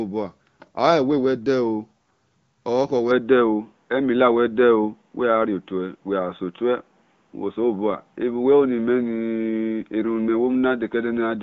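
Speech that turns abruptly dull and boxy at 3.11 s and stays that way to the end, with no gap at the change. Before that point the wideband codec path carries content up to about 7.5 kHz. After it, nothing survives above 3.8 kHz, the level shifts by roughly 5 dB, and a faint new noise floor sits far below the speech. The likely cause is an input switched to a poorer device, such as a narrowband headset profile.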